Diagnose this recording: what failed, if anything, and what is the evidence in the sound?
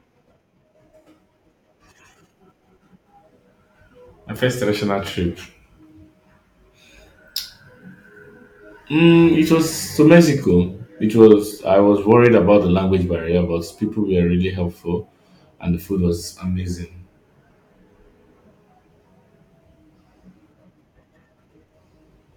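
Hard clipping at the converter or a gain stage: from 12.12 to 12.36 s, speech peaks overdriven by about 2 dB are cut flat, adding brief crackle on loud syllables.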